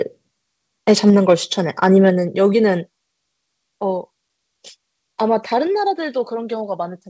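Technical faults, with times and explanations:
1.83–2.10 s, microphone overload: peaks go about 2 dB past the converter's limit and their tops are sliced flat, around one percent of samples, giving a harsh, crackly edge, likely from excessive input gain.
2.10 s, microphone volume stepped down: the level drops abruptly by about 4 dB right after the distorted peak, likely as automatic gain control lowers the input in a single step.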